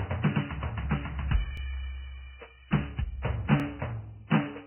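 Heavy codec damage, likely from low-bitrate Vorbis compression around 10 kbps, runs through the whole music clip: nothing survives above 3.1 kHz, and coarsely quantised treble turns hissy, grainy and blurred. At 1.57 s, overlapping chunks make a 25 ms piece play twice where one 2-second chunk begins before the previous ends, heard as a stutter at the join. From 1.73 s to the end, sample clock jitter of roughly 10 microseconds times each sample slightly early or late, adding a roughness that tracks loud, steep passages, at around 20 dB below the music. At 3.60 s the same chunk overlap repeats 25 ms again, producing a second stutter about two seconds after the first.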